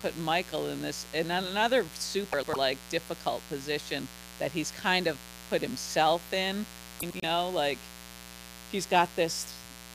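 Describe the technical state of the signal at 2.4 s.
At 2.4 s the speech sits inside a stretch of frames out of order, running from 2.32 to 2.56 s. It falls between "in this in another" and "difficult position that he's". Two neighbouring blocks of about 104.5 ms each were decoded in swapped order. The later block plays first, then the earlier one. The sound turns into a garbled flutter. The span fits two runs of four frames. No time is lost.

Under this, a mains buzz is present at this moment as well. It is built on 60 Hz. Sharp switching spikes land twice per mains cycle. Their harmonics climb well into the kilohertz range. The result is a steady, raspy buzz. It sits roughly 15 dB below the speech.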